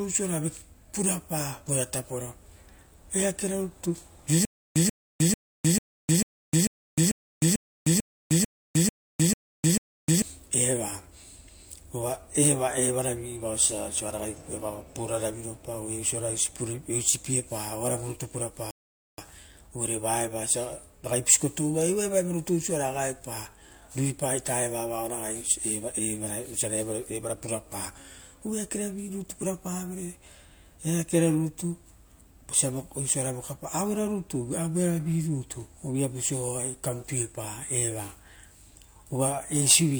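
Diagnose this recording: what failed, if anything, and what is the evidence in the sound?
Stutter with silent gaps at the playback buffer: just after "eakera rutu", from 4.45 to 10.22 s, a 136 ms fragment repeats 13 times every 444 ms, separated by 308 ms of digital silence. The waveform shows identical bursts between flat silent stretches. This is likely a stalled stream replaying its last fragment at each retry, and the original audio from that span is lost.

Rebuffering stall, at the network and playback stage: from 18.71 to 19.18 s the sound drops to silence, then resumes exactly where it stopped, adding 472 ms. A spectrogram shows a clean vertical blank band with no repeated material. The player ran out of downloaded data and waited for more.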